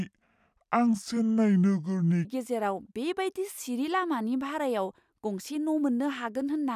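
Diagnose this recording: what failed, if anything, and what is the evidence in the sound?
Wrong sample rate at playback, 0 to 2.25 s: speech is two-thirds speed and 7 semitones low at once, unlike a pitch-only shift. This fits 48 kHz audio clocked out at 32 kHz.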